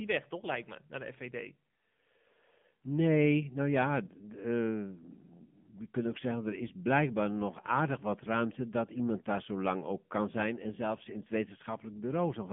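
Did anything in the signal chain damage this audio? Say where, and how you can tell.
Yes. The damage sits at the codec stage and runs through the whole speech clip. This is the AMR narrowband mobile codec, the 2G and 3G phone codec. Nothing reaches above 3.6 kHz, and the band is held to roughly 150 Hz to 3.5 kHz. Codec damage is plainly audible as a buzzy, synthetic edge. That fits a low AMR-NB mode near 7.4 kbps. At that rate, too few pulses drive the vocal-tract model in each frame.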